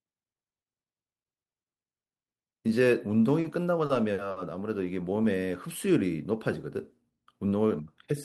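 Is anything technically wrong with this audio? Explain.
Yes. At 3.41, 3.86 and 4.31 s there are short stalls from a late packet. The buffer ran dry, so each sound is held 30 to 50 ms with a faint buzz or dip, then resumes intact.

From 5.13 to 5.40 s there is a jitter buffer slow-down. Repeated pitch periods add 36 ms, so the speech plays at 90% speed without a pitch change.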